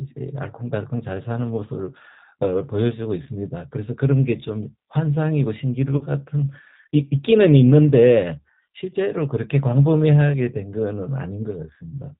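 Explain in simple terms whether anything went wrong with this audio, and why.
Throughout, the speech has the rough, slightly synthetic edge of the G.729 codec, a phone-call codec that rebuilds each voice sound from a simple model and drops everything above 4 kHz. That is why it sounds muffled and rough all the way through, rather than crackling in patches.

Twice there is VoIP packet loss concealed by the speech codec: at 3.24 to 3.29 s, where about 20 ms of sound went missing, and at 5.97 to 6.05 s, where about 40 ms was lost. The decoder filled each hole by stretching the last sound into a fading buzz or noise, and the voice stays weak for a moment afterwards.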